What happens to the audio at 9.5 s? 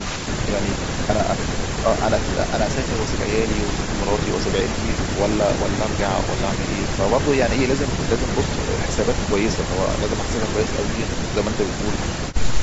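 The breathy, grainy edge on the speech at 9.5 s is present from start to finish and is likely Bluetooth LC3 compression. The codec encodes short transform frames, consistent with 7.5 ms, and at a rate that fits about 48 kbps it zeroes parts of the upper spectrum and fills them with synthetic noise. That noise fill gives the speech a hissy, granular texture. The call path's band limit means nothing sits above 8 kHz.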